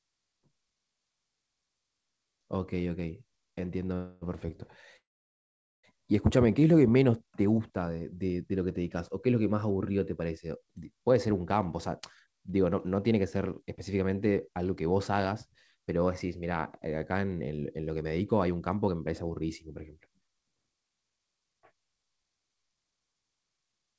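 A speech recording carried over a call link, band-limited with nothing above 8 kHz, which fits a wideband codec such as G.722 at 64 kbps. It has two call audio freezes, likely from packets held up in transit until the jitter buffer ran dry. At 3.94 s the last sound is stretched into a fading buzz or hiss for 0.28 s. From 4.97 to 5.85 s a similar fill lasts 0.87 s, about 0.82 s of it silent. Unlike a dropout, nothing is lost: the speech resumes exactly where it stopped, only later. A jitter buffer slow-down between 6.46 and 6.72 s repeats pitch periods to rebuild reserve, adding 37 ms and running at 88% speed. The sounds are drawn out while pitch stays put, which separates it from a tape-style slowdown. Jitter buffer speed-ups from 11.87 to 12.86 s (109%, roughly a tenth of a second cut) and from 17.96 to 23.95 s (111%, around 0.7 s cut) trim pitch periods to shed excess delay. The speech sounds hurried, but unlike a pitch-shifting playback speed change, its pitch stays the same.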